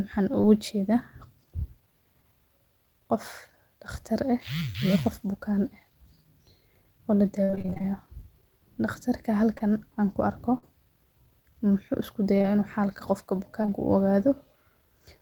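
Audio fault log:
0.41–0.45 s, 9.58–9.62 s, 12.38–12.46 s: short concealed packet loss. About 20 ms of audio never arrived in time at each point; at 12.38 s two such holes fall back to back. The decoder extended the preceding sound across each hole, heard as a brief smear or wobble.
7.43–7.86 s and 13.62–13.72 s: repeated packet loss (robotic sound). The first stretch has ten gaps totalling about 240 ms, the longest 51 ms, with roughly half the span synthesized. The second has three gaps totalling about 60 ms. Constant patching gives choppy audio with missing fragments.
10.58–10.64 s: burst of packet loss. About 40 ms went missing in one run and was covered by roughly 46 ms of concealment. The last sound was continued and faded down, then the audio resumed further on, with the intervening material gone.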